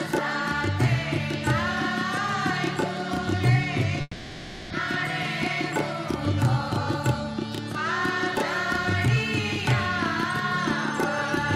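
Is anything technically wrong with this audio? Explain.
Yes. From 4.01 to 4.74 s the last sound stretches into a fading buzz, then briefly goes silent. The 400 ms that is lost never returns, likely from a long network dropout.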